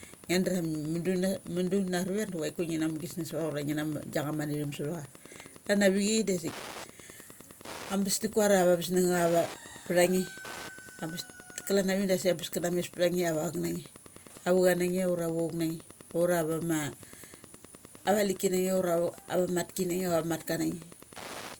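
A nearby Wi-Fi radio is coupling into the audio circuit for the whole clip, and the circuit rectifies its transmissions. That is Wi-Fi interference. Its beacon repeats every 102.4 ms, so the speech carries a steady ticking at almost exactly ten clicks per second, running evenly from start to finish. The ticks sit roughly 20 dB below the speech.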